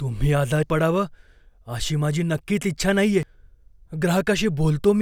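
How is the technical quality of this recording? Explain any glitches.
The speech has two skips caused by compressed frames skipped. At 0.63 s one frame of about 93 ms, roughly a tenth of a second, never reached playback, and at 3.23 s, after "माझी नक्कीच इच्छा नाहीये", two frames were lost, around a fifth of a second. Each time the audio jumps ahead.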